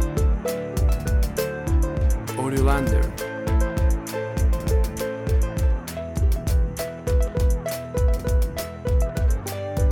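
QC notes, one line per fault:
No fault found, so there is nothing to log in the QC notes.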